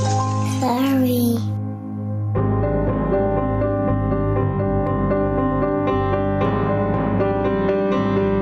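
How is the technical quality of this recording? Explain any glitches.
The recording has gain pumping throughout: the gain swings by around 10 dB, likely from excessive gain hitting a fast limiter. Unlike a noise gate, it lifts the background between sounds rather than silencing it.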